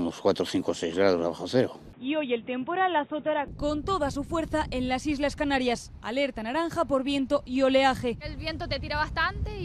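At 1.93 s the sound suddenly goes dull and boxy, with nothing above 3.8 kHz, and a new noise floor appears well below the signal while the level stays roughly the same. It clears again at 3.48 s with no gap, most likely an input switched to a poorer device and back.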